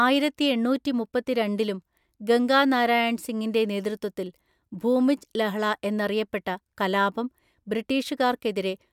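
Nothing technical stands out in this recording of speech; there's no fault to point to at any moment.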